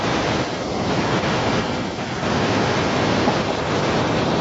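Echo leak runs from 0.0 to 0.7 s, 0.98 to 2.24 s and 2.45 to 3.71 s: a copy of the speech trailing about 210 ms behind, faint at first and then only slightly below the direct sound, likely from a far-end loudspeaker the echo canceller failed to suppress.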